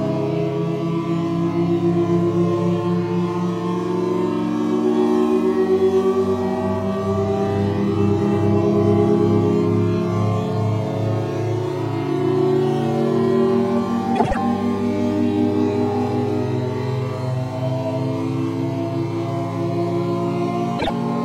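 At 14.16 s, frames out of order appear. Two neighbouring blocks of about 78 ms each were swapped, so the stretch to 14.37 s plays its halves in reverse. The block size fits runs of three codec frames. It sounds like a brief garbled flutter. At 20.79 s, it happens again on a smaller scale. Two blocks of about 26 ms, fitting single frames, trade places until 20.90 s. No time is lost either time.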